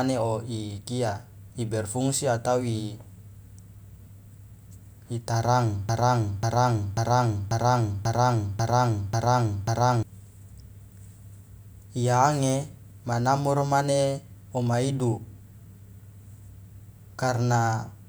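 At 5.89 s the speech locks into a broken-record loop: a 0.54 s fragment plays eight times back to back until 10.03 s. Likely the player or stream stalled and kept resending its last chunk, so whatever should have played there is gone.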